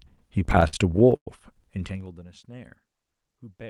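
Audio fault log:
0.45–1.29 s: repeated stalls (stutter). Eleven late-packet gaps, longest 108 ms, were bridged by extending the last sound, so the audio drags. On a spectrogram these show as smeared, repeated frames.
1.61–2.29 s: zipper noise. The level falls roughly 25 dB in unsmoothed 2 dB steps, about twenty a second, each clicking. The waveform envelope looks stair-stepped, with faint vertical lines on the spectrogram.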